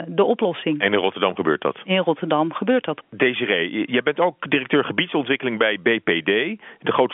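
No technical faults are audible in this telephone speech.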